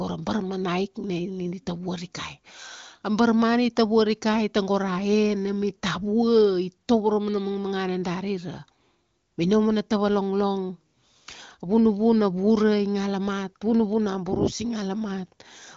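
Nothing goes wrong here; the speech comes through as ordinary HD Voice call audio, carried by the AMR wideband codec at 18.25 kbit/s with the usual ceiling at 7 kHz.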